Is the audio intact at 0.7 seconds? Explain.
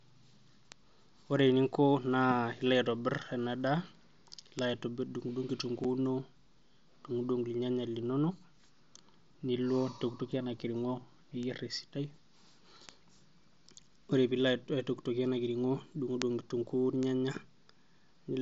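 No. At 0.72 s a single sharp tick, spread across the whole spectrum and unrelated to the speech, cuts through. It is a bit error spike: one flipped bit in a single sample makes its value jump by a power of two and snap straight back.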